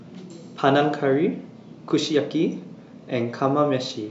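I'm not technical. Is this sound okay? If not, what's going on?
Yes, nothing wrong here.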